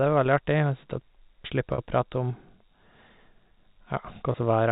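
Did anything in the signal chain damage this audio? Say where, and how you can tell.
Yes. Brief buzzy, held tones at 1.74–1.78 s and 4.32–4.34 s point to network packet loss with pitch repetition: the receiver looped the last pitch period across 40 ms and 20 ms gaps.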